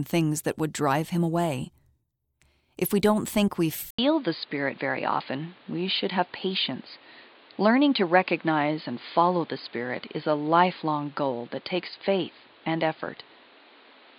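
At 3.91 s, right after "we don't think we", the input likely switched to a poorer device. An 80 ms silence marks the switch. From then to the end, nothing passes above 4.9 kHz, so the speech turns dull and boxy over new background noise about 30 dB down.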